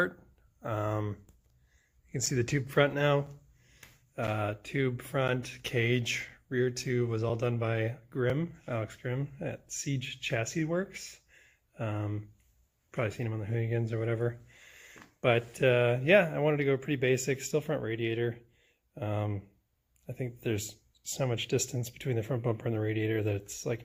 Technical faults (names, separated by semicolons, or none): gap between stream segments